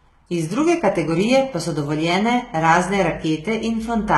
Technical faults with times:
0.00-4.18 HE-AAC compression

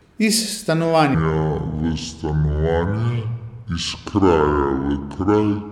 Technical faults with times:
1.14-5.72 section at the wrong speed

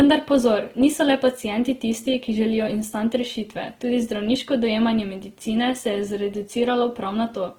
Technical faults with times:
0.00-7.58 Opus compression

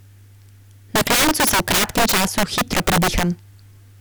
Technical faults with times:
0.00-4.00 integer overflow

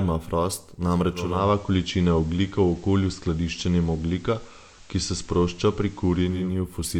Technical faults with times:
1.09-6.64 digital radio blending to analogue

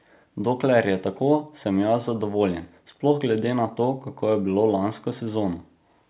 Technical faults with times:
none

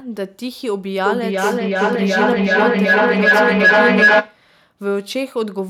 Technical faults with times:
1.06-4.45 feedback howl

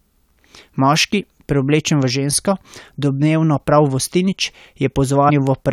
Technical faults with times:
5.28-5.30 damaged data in a compressed stream

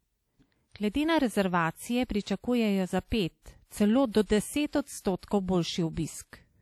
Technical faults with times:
0.00-6.61 WMA compression

